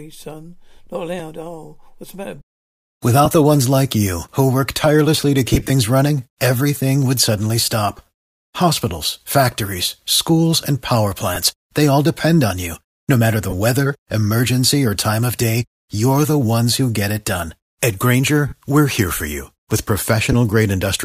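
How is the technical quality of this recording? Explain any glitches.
The speech is marred by repeated brief gaps from lost LE Audio frames at 3.25 s (just before "the ones like you"), 5.53–5.70 s (between "who work tirelessly to" and "running everything would suddenly"), 7.97–7.99 s, 11.35 s, 13.50–13.54 s, 18.48–18.53 s (before "we're here for you") and 20.32–20.34 s. Each is a short grainy smear rather than a dead click. The decoder re-plays the last spectrum with scrambled phase, and the gap lengths fit 7.5 ms frames, likely from the LC3 link. The 5.5 s event is scattered losses.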